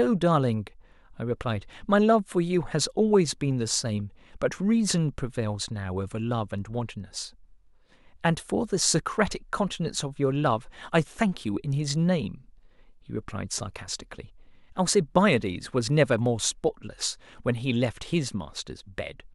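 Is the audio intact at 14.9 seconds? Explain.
Yes, at 14.9 s the speech plays through intact, with no fault at that moment.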